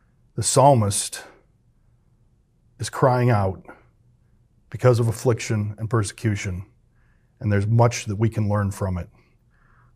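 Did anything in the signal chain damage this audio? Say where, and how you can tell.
No, nothing in this speech recording stood out on listening as damage from any stage of the signal chain.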